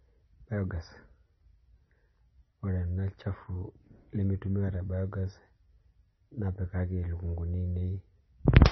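MP3 compression artefacts run through the entire speech recording. The sound is heavily damaged, with nothing above 5.9 kHz and a watery, swirling texture as weak frequency components drop in and out. That points to a very low bitrate around 24 kbps, likely from MP3 encoding.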